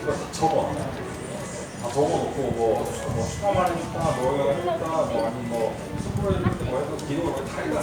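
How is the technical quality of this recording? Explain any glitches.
No technical glitches can be heard anywhere in the recording, and the signal stays steady and intact throughout.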